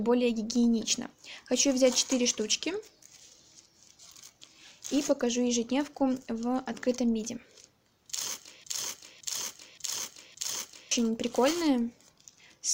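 From 8.64 to 10.91 s a broken-record loop repeats a 0.57 s fragment four times, likely from a stalled stream; the waveform shows identical blocks tiled back to back.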